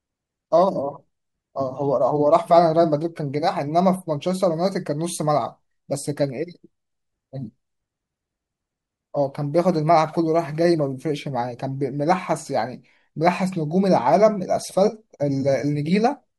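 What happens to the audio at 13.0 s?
Nothing goes wrong at 13.0 s: the speech carries on intact through that moment, with no dropout, glitch or distortion.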